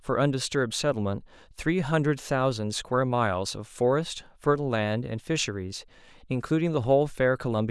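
Nothing goes wrong technically anywhere in this speech recording, so there's no fault to point to at any moment.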